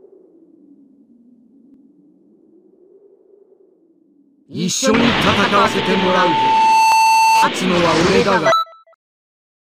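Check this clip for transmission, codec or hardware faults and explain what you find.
Two kinds of fault are present: repeated skips and a feedback tone.

Dropped buffer (overrun) at 1.74, 4.71, 5.67, 6.92 and 8.01 s: each is a sudden jump forward, with no gap of silence. The likely cause is that the software didn't collect its samples before the hardware overwrote them, so the two sides join directly. Most losses are around 20 ms, but the 4.71 s loss is about 70 ms and the 6.92 s one about 50 ms.

Loudspeaker feedback squeal from 5.55 to 7.54 s: a microphone is picking up the loudspeaker it feeds, and at 889 Hz the loop gain exceeds one. That single tone swells over about a second and a half to sit roughly 5 dB above the sound, then stops.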